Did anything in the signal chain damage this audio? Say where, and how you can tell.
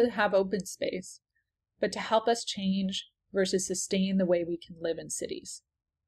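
No, the signal shows no audible damage from any stage of the chain.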